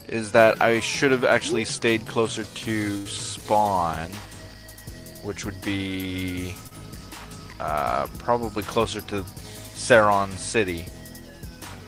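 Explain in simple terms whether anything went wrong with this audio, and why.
Two things went wrong, both from parts of the audio going missing on the way.

At about 2.97 to 3.07 seconds there is a burst of packet loss. Roughly 80 ms of audio never arrived in time. The receiver covered the hole by stretching out the last sound it had, letting it fade as the gap went on. So you hear a held buzz or fading hiss, and then the sound picks up again slightly further along. What should have been in between is simply gone.

At about 6.67 to 6.73 seconds there is a short concealed packet loss. This time only about 40 ms was missing. The receiver patched it by continuing the sound just before, then blended back into the real audio. Because the gap is so short, it comes across as a quick smear or tiny wobble rather than an obvious dropout. A very brief sound there could be lost completely.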